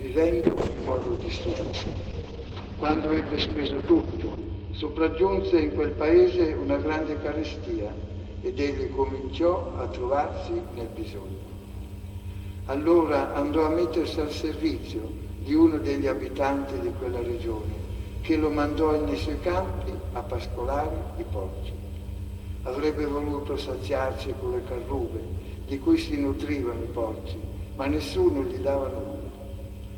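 A call bitrate drop runs from 0.47 to 10.69 s: the audio turns coarse and muffled as the encoder is starved of bits, which points to a fall from about 32 kbps to about 7 kbps, with the top end cut from 20 kHz to 6 kHz, worst for about 3.9 s.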